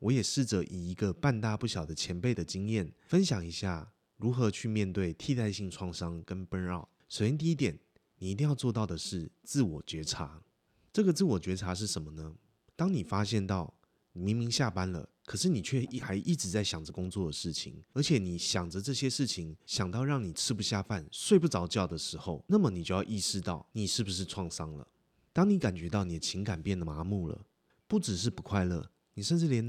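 At 16.90 s and again at 26.85 s, ten seconds apart, the speech skips abruptly as a short piece, around 50 ms, vanishes and the two sides butt together; likely audio missing between chunks in 10 s blocks. Waveform and spectrogram show a hard vertical seam, with no silent gap.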